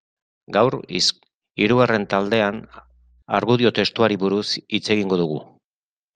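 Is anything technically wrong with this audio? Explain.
Yes, there is mains hum. From 1.72 s to 3.22 s a steady 60 Hz tone sits under the speech, roughly 35 dB below it, so it is faint but audible as a low drone. The power line is coupling into the signal through a ground loop or nearby transformer. On a spectrogram it appears as a thin horizontal line at 60 Hz spanning those 1.5 seconds.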